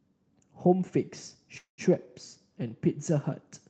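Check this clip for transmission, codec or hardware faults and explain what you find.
One transmission fault is audible, a call audio freeze, heard through a call-codec path whose top end stops around 8 kHz, consistent with Opus at roughly 32 kbps.

Call audio freeze, 1.57 to 1.81 s. The likely cause is that packets stalled in transit until the jitter buffer ran dry. The receiver stretches the last sound into a fading buzz or hiss that drops to silence for about 0.11 s. The speech then picks up exactly where it left off, so nothing is lost, but everything afterwards runs about 0.21 s late.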